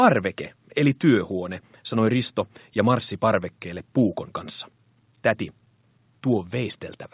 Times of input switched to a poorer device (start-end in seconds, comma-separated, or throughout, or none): none